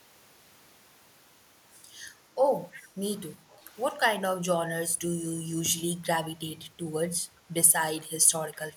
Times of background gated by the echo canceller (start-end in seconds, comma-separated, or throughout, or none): 3.38-3.68